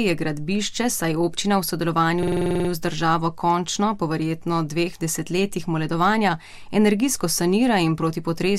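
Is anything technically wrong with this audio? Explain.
Yes. A system hang loop occurs from 2.23 to 2.69 s. The system stalled while the sound hardware kept cycling one 46.4 ms buffer, which fits a 2048-sample ring buffer. That slice repeats ten times at 21.5 Hz, producing a rapid rattling stutter, with essentially no audio lost.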